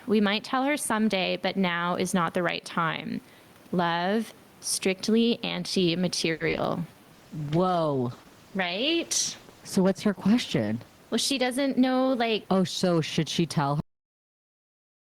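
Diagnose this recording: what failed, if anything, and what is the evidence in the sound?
Gain pumping runs through the whole speech recording, at the microphone and call-processing stage. The gain swings by roughly 10 dB, and loud and soft passages sit squashed close together. This is likely input gain set far too high, with a fast limiter or compressor clamping each peak. On the waveform the peaks look flattened to a near-constant ceiling.

Repeated packet loss, heard as robotic sound, hits the network stage from 6.31 to 6.59 s. Four holes fall in that short span, the longest 90 ms, and about 43% of it is patched by stretching the preceding sound. Roughly 120 ms is filled in and 60 ms is simply lost. The result is choppy. A spectrogram shows smeared, repeated harmonic bands with abrupt seams and brief gaps.

A jitter buffer slow-down follows from 6.94 to 7.14 s. The receiver repeats pitch periods to rebuild its reserve, adding 39 ms, so the sound runs at about 84% speed with unchanged pitch and drawn-out vowels. 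On a spectrogram the harmonics keep their spacing but stretch in time, and the waveform shows near-identical periodic cycles repeated in a row.

A call bitrate drop lasts from 7.15 to 12.95 s. The bandwidth estimate collapses and the encoder falls from 48 kbps to 13 kbps, holding the low rate for about 3.6 s. The sound turns rough and watery, and the top end is cut away. On a spectrogram the energy above several kHz vanishes in a hard shelf, and the harmonics look blocky and smeared until the rate recovers.

A jitter buffer speed-up overlaps this from 11.15 to 12.45 s. The buffer held more audio than it aimed for, so the receiver trimmed short runs of pitch periods, roughly 100 ms in total. The sound plays about 8% fast at the same pitch and feels slightly hurried. The spectrogram keeps the harmonic spacing but compresses syllables in time, with tiny splice points visible in the waveform.

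A cut-off end occurs at 13.80 s, at the storage or playback stage. The final buffers were never written, so the sound stops mid-utterance and drops straight to digital silence with no decay tail, running on that way to the end. On the waveform the signal ends in a sharp vertical edge followed by a flat line, and a spectrogram shows energy ending in a clean vertical wall. Room noise, about 35 dB below the speech, is part of the acoustic recording and not a system fault.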